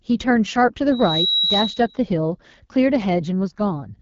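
Throughout, the AMR wideband (HD Voice) codec runs at a low rate, consistent with 8.85 kbit/s, leaving the speech rough and raspy with nothing above 7.5 kHz. From 0.91 to 2.03 s, a microphone-to-loudspeaker loop runs away at 3.9 kHz, producing a loudspeaker feedback squeal that swells within a third of a second to about speech level.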